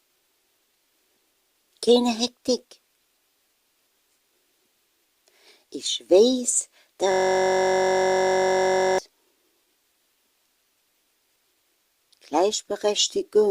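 At 7.12 s the audio locks into a system hang loop that lasts until 8.98 s. The driver or host stopped supplying new data, so the hardware kept replaying the same 21.33 ms stretch of its ring buffer, which fits a 1024-sample buffer, close to ninety times over. Because the loop is so short, it sounds like a steady buzz at about 46.9 Hz rather than a stutter. Unlike a dropout, the sound never goes silent, and unlike mains hum, the buzz is made of the repeated audio fragment itself.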